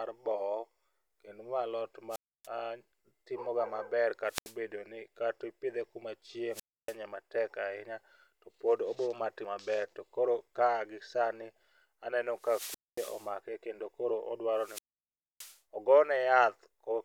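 Hiss swells, the speech drops into near silence, then returns at 2.09, 4.26 (after "timo ga maber"), 6.51, 12.34 and 14.54 s: wireless microphone squelch dropout, the fading radio signal triggering the receiver's mute.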